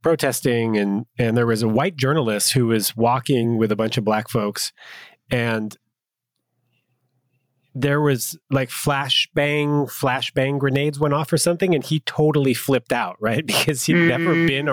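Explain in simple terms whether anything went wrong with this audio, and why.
Something did go wrong: gain pumping runs through the whole recording, from start to finish. Loud and soft parts of the speech end up closer in level, so the sound is squashed. The likely cause is a microphone level set far too high, with an automatic limiter hauling it back down on every loud sound.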